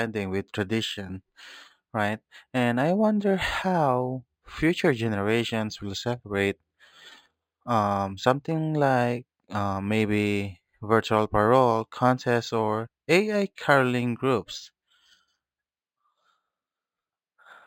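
Throughout the speech, sibilants shimmer faintly and metallically over a dulled top end. This is imaging from linear upsampling: straight-line interpolation leaves mirror images at roughly 5.5 to 11 kHz.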